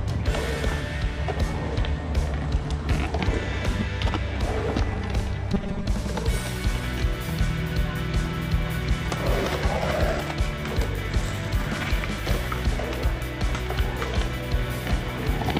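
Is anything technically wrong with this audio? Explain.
Yes. Robotic sound from repeated short buffers at 5.53 to 5.86 s: likely starved playback looping about half the audio in 5 ms chunks, forcing a rigid 200 Hz metallic buzz.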